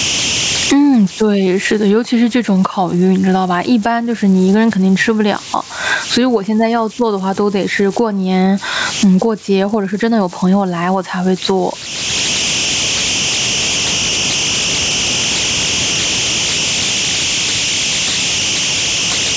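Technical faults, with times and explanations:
Throughout, converter idle tones: A whistle near 3 kHz sits in the pauses and turns to grainy noise under quiet speech, about 20 dB below the signal. An undithered delta-sigma converter is cycling through repeating bit patterns at low input levels.
Throughout, gain pumping: The level swings by around 25 dB. Loud and soft speech sound squashed together. The likely cause is input gain set far too high, with a fast limiter clamping each peak.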